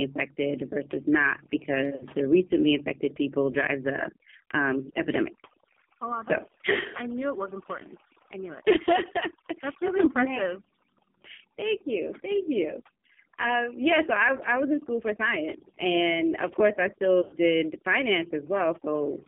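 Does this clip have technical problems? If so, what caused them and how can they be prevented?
Yes. Throughout, the background drops and breaks up into twinkling specks. This is overdone noise removal: the reduction was set so strong that bands near its noise estimate were pulled down or cut entirely, taking quieter speech detail with them. Using a gentler reduction setting, or recording in a quieter space, prevents it.

The speech is also confined to roughly 200 Hz to 3.5 kHz and sounds heavily buzzy and synthetic. Those are the marks of the AMR narrowband mobile codec, which rebuilds speech from a vocal tract model and a few pulses, and the level of damage fits a low bitrate around 5.9 kbps. A wideband codec or a higher-rate mode avoids it.

At 1.96 to 2.04 s, between "versus not" and "the recently infected people", the sound briefly warbles and dips for 40 ms. At 17.22 to 17.35 s, after "and of course I", it drags out and fades over 100 ms. 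Both are lost AMR speech frames: the decoder repeated the last good settings at falling gain, and the longer gap suggests about five frames were lost. A stronger radio link or better error protection prevents this.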